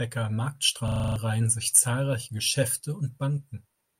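From 0.88 to 1.16 s there's a system hang loop. The machine or its driver stalls while the sound hardware keeps replaying the same 40 ms slice of its buffer, seven times over, so you get a rough, rattly buzz pulsing at 25 Hz instead of new audio. When it lets go, the speech picks up at "reihen sich zahlreiche", but roughly a third of a second of material is simply gone.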